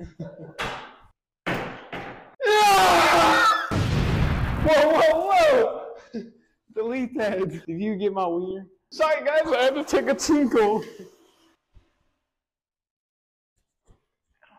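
From 2.69 s to 5.38 s the audio carries an unreliable data bit: one marginal data line flips its bit in a random share of samples, adding equal-size spikes at about -33 dBFS, heard as a steady fizzing crackle that persists through quiet passages.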